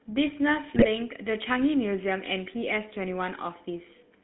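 Throughout, the speech passes through the GSM full-rate codec, which rebuilds it from a coarse vocal-tract model and sparse pulse excitation, leaving a plainly buzzy, gravelly roughness, consistent with a 13 kbps stream, within a 150 Hz to 3.5 kHz line band. From 0.75 to 0.88 s, GSM bit errors corrupt the decoder's filter, pitch and gain values over several frames, so the voice briefly breaks into squawks, pops and gargling.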